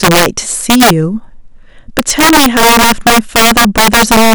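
Throughout the speech, integer overflow: gain about 8 dB too high wraps a small share of peaks to the opposite sign, giving violent cracks far harsher than clipping's flattened buzz.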